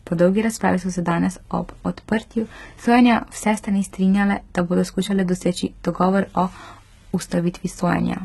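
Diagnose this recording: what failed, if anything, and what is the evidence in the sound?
HE-AAC compression, heard throughout the whole clip, points to a codec-stage failure. Nothing reaches above 11.8 kHz, and the treble below that ceiling sounds synthetic: s sounds come out gritty and lispy, with a metallic edge. That is likely spectral band replication at work. The codec kept only the lower spectrum and rebuilt the top by copying lower bands upward under a coarse envelope, so upper harmonics misalign with the speech beneath them. The heavy damage fits a bitrate around 16 kbps.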